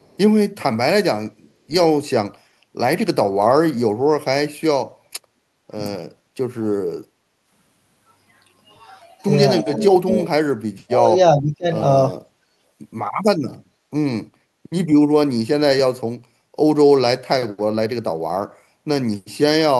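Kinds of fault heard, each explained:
Echo leak: a very faint copy of speech, delayed 315 ms, sounds in the first 0.17 s, likely residual loudspeaker echo the canceller missed.
Background gated by the echo canceller: room sound dips by about 11 to 20 dB at 5.28, 6.08, 7.04 and 12.44 s, as the canceller clamped the microphone.
Speech suppressed in double talk: the voice drops away deeply in pieces from 9.61 to 11.66 s and briefly at 12.11 s, likely the canceller muting overlapping talk.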